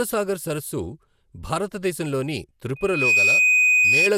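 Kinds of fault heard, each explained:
Generation loss: The speech has a swirly, smeared and hollow character, with blurred consonant onsets and no content above 18.1 kHz. This points to repeated lossy coding, likely around fifteen passes of MP2 at a rate that fits 128 kbit/s. Each decode and re-encode quantises the signal again on a shifted frame grid, so noise and spectral gaps build up beyond what a single pass at that bitrate would produce.
Loudspeaker feedback squeal: A microphone is picking up the loudspeaker it drives, and at 2.5 kHz the loop gain exceeds unity, so that frequency reinforces itself on every trip around the loop. From 2.76 s a single tone at 2.5 kHz swells over roughly 0.3 s into a steady squeal sitting about 10 dB above the speech. It continues until 4.11 s, when the tone stops.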